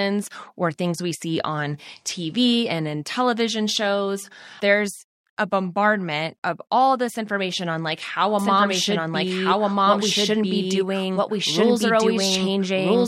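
From 8.39 s to the end, a doubled audio track appears, most likely because the speech is being captured a second time along a slower path and mixed back in. A second full-band copy trails the original by roughly a second and a half, at much the same level. It cuts in abruptly, with no decay or room colouring, so the speech becomes two overlapping, out-of-step streams through to the final moment.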